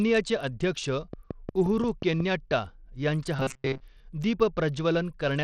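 Bluetooth SBC compression runs throughout the speech, likely from a low bit pool: the treble thins and flickers, and gritty quantisation noise sits on the voice, which fits a rate near 80 kbps.

A train of clicks runs from 1.13 to 2.21 s: about seven regular ticks at 5.6 per second, roughly 10 dB above the speech, likely from interference or a struggling interface.

Robotic sound from repeated short buffers appears from 3.36 to 3.81 s, likely from audio arriving too seldom: most of this stretch is repeated snippets, forcing a metallic 133 Hz buzz.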